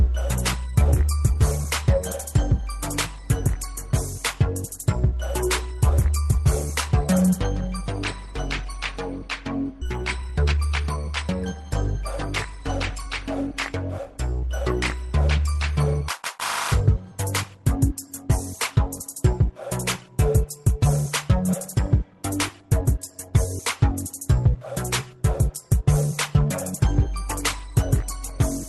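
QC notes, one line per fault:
9.81 s, skip ahead: playback jumps forward with no fill, roughly half a second of audio missing, and the two sides butt together almost seamlessly. Later audio was already waiting, so the receiver discarded the stretch in between, either lost in transit or dropped by the jitter buffer on overflow. The cut takes out that much latency at once, which is why the splice sounds abrupt rather than like a dropout.
10.22–11.88 s and 12.29–14.15 s, jitter buffer speed-up: the first run plays at 114% and the second at 103%. The receiver removed short pitch-period-length slices many times in a row, cutting about a fifth of a second in the first run and a few tens of milliseconds in the second. Pitch stays put but the first run sounds hurried. Over-full buffer depth was being trimmed back to target, with Opus coding noise and a top end near 12 kHz audible throughout.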